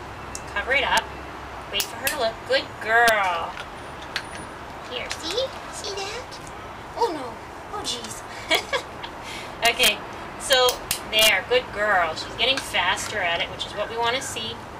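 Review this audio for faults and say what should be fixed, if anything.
Integer overflow occurs at 0.97, 1.80 to 2.07, 3.08, 8.55, 9.65 to 9.88 and 10.53 to 11.29 s, with overdrive of about 1, 5, 2, 0, 3 and 5 dB respectively. Where the signal exceeded the largest integer value, it wrapped to the opposite sign instead of being held at the limit, so each excursion jumps across the full range. Short events crack, and the heaviest overloads buzz through the loud passages. To prevent it, saturate or limit sums and gain stages before conversion to integer.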